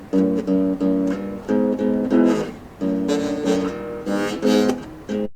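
No technical faults can be heard anywhere in this recording of sounds. Nothing in the audio calls for a timestamp or further comment.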